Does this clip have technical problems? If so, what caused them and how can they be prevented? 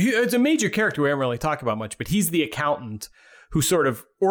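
No, the signal shows no technical problems, so there is nothing here that needs preventing.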